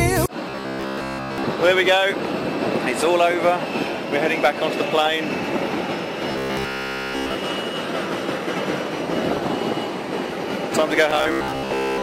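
From 0.50 to 1.44 s, the sound becomes robotic from repeated short buffers. It turns into a rigid, metallic buzz at 66.7 Hz. That fits a segment of about 15 ms looped over and over, likely because fresh audio arrived too slowly. Real content in that span is skipped. The same buzz returns from 6.32 to 7.37 s, again almost entirely repeated. A final burst runs from 11.11 to 12.02 s, mostly repeated.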